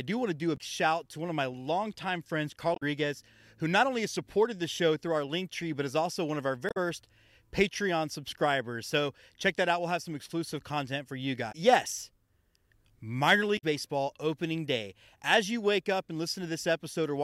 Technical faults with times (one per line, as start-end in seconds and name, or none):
0.54-0.60 damaged data in a compressed stream
2.73-2.83 damaged data in a compressed stream
6.68-6.77 damaged data in a compressed stream
11.48-11.55 damaged data in a compressed stream
13.55-13.64 damaged data in a compressed stream